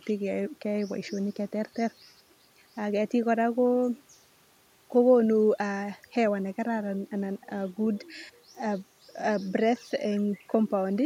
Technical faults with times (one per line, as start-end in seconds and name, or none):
none